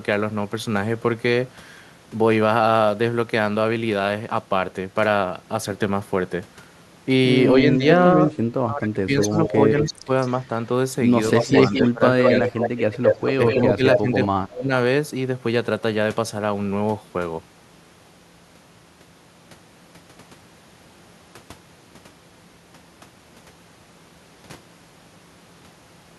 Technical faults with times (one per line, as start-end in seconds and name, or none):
7.62-7.84 speech suppressed in double talk
8.66-10.10 speech suppressed in double talk
9.21-10.47 echo leak
11.32-11.90 echo leak
11.43-12.77 speech suppressed in double talk
12.23-14.25 echo leak
13.38-14.71 speech suppressed in double talk